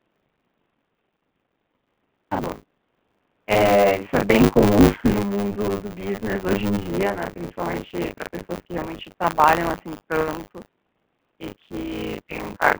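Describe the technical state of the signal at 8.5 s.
At 8.5 s you're hearing two faults, and both run through the whole clip, so that moment is just a sample of what's everywhere.

First, the G.729 codec. The speech is squeezed into a phone-line band of roughly 150 Hz to 3.4 kHz with nothing above 3.5 kHz, and the rough, slightly synthetic texture fits an 8 kbit/s G.729A link. That codec rebuilds the speech from a vocal tract model and a handful of pulses per frame rather than carrying the actual waveform, so the damage is plainly audible.

On top of that there's buffer tearing. The writer and reader of the playback buffer have drifted so they cross every period, and about a third of each buffer ends up holding stale audio from around 40 ms earlier, with hard joins on either side. The result is a steady 100 Hz robotic buzz, pointing to 10 ms buffer periods, that rides along whenever speech is present.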